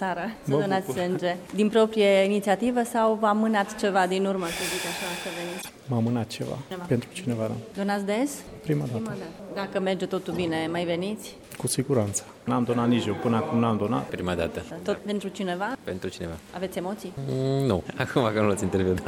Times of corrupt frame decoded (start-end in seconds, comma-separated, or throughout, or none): 5.59-5.70, 6.84-6.90, 10.30-10.37